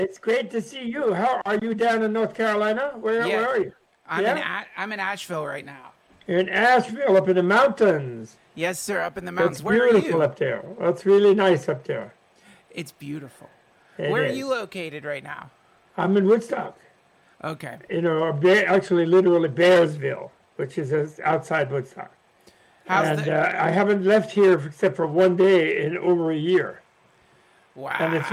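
Nothing goes wrong anywhere in this one; there's no glitch, dropout or other technical hiccup to point to at any moment.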